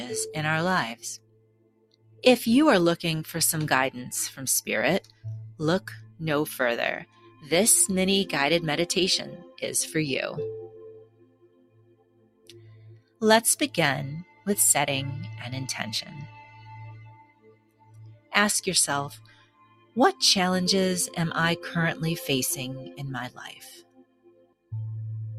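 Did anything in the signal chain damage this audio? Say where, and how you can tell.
Yes, and it happens in call processing: a noise suppressor applied to music or sounds was left running through the whole clip. You can hear the level swing by roughly 20 dB as it keeps deciding what's noise. Sharp onsets punch through, but anything held or decaying gets pulled down, so the sound pumps and thins instead of sitting steady. The suppressor is tuned for speech and treats sustained tone and ambience as something to remove.

The sound cut by the noise suppressor is clearest in seven spots: 0.95–2.23 s (down about 18 dB), 4.31–7.51 s (about 17 dB), 9.25–9.62 s (about 9 dB), 10.67–13.22 s (about 18 dB), 14.24–14.46 s (about 13 dB), 16.04–19.96 s (about 18 dB) and 22.86–24.72 s (about 19 dB). In the longer stretches, between about 1.5 s and 3 s sinks. Each time the steady part or the tail drops away while the attack survives.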